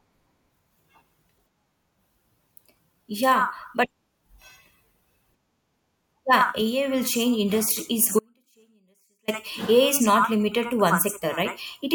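At 8.19 s, just after "will change industry is", the speech drops out abruptly for about 1.09 s, until 9.28 s. The gap is not silent. It holds only a faint sound, roughly 40 dB below the signal. This is an audio dropout to a faint residue, likely a momentary loss of the source with the downstream path still live.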